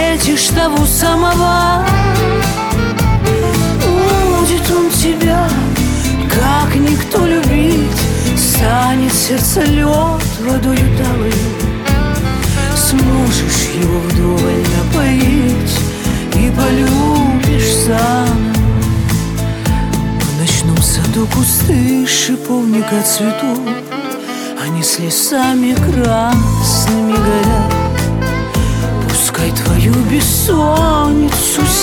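Nothing stood out on listening to this audio.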